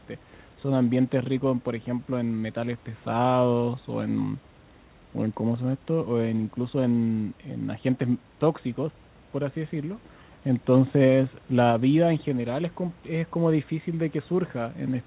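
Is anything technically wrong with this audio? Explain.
No, nothing here is actually a fault: the sound tops out around 4 kHz, as expected from a G.711 A-law call path at 64 kbps, and the faint room noise sits about 32 dB below the speech.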